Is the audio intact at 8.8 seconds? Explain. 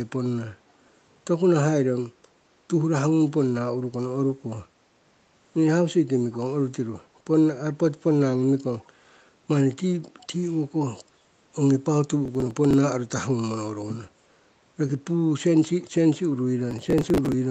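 No. From 8.79 to 8.87 s there is an echo leak: a faint delayed copy of the speech, trailing by about 348 ms and very low, roughly 35 dB under the direct sound, sits briefly beneath it. The likely cause is a far-end loudspeaker whose echo canceller let some of its microphone pickup return down the call. On a spectrogram it shows as a weak, smeared repeat of earlier speech energy offset in time. The waveform barely changes.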